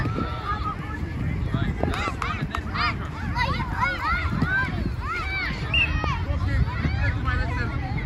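At 1.84 to 2.10 s, two loud pops, then another at 6.04 s, each about 15 dB above the sound, are likely voltage spikes. Each shows as a tall waveform spike and a thin broadband vertical stripe.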